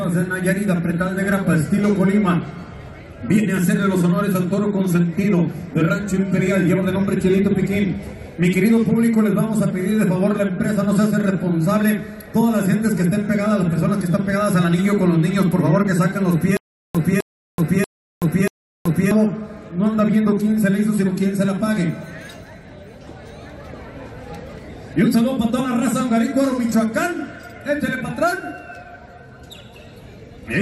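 From 16.57 to 19.11 s there is a stutter with silent gaps: a 258 ms fragment repeats four times, each followed by 378 ms of digital silence, every 636 ms. A likely playback stall is to blame. The waveform shows identical blocks separated by flat silent gaps.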